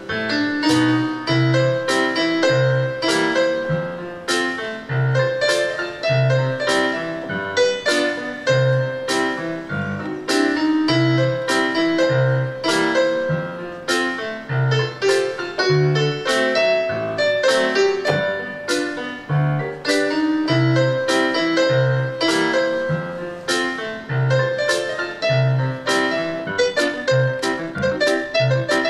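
At 26.42 s the pace suddenly jumps and stays that way right through to the end of the clip at 28.90 s. The sound runs at roughly 1.87 times its normal speed while the pitch doesn't budge, so it comes across as rushed rather than chipmunky. That's the signature of a time-stretched section: the likely cause is software squeezing the tail to fit a set length, holding pitch by dropping short slices as it goes.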